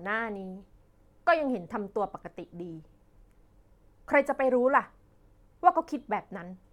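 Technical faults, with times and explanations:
Nothing stood out as a technical problem on listening through this speech recording.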